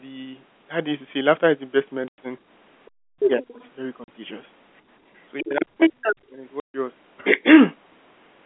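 At 2.08 to 2.18 s and again at 4.04 to 4.08 s the speech drops into dead silence for 100 ms and 40 ms. This is packet loss filled with silence. Both gaps are whole multiples of 20 ms, which fits 20 ms packets, and each hole has hard edges. Unlike echo-canceller suppression, the level does not fade; it falls straight to nothing and returns just as abruptly.

From 5.37 to 5.43 s a faint second voice, about 20 dB under the talker, slips in. This is the other side's voice leaking through, likely loudspeaker echo that the canceller left in the microphone signal. It returns from 5.79 to 6.15 s at roughly the talker's own level, and again from 7.17 to 7.25 s about 25 dB down.

Overlapping those stretches, from 5.42 to 5.96 s and from 6.12 to 6.43 s, the talker's voice is pushed down by as much as about 35 dB and then about 40 dB, affecting roughly 400 ms and 200 ms in all. This is speech suppressed in double talk, likely the echo canceller turning everything down while both sides spoke.

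At 6.60 to 6.74 s another silent hole of 140 ms appears, with hard edges, again a multiple of 20 ms.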